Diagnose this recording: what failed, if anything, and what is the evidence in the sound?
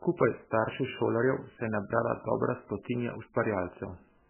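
The failure sits at the codec stage, and it is heavy throughout the speech: the audio has a watery, swirly quality, with nothing at all above 3 kHz. The likely cause is MP3 compression at a very low bitrate, which fits something around 8 kbps. Starved of bits, the encoder drops weak frequency lines that flicker on and off between frames and cuts the treble outright. A spectrogram would show a hard ceiling at 3 kHz and patchy, blinking blocks below it.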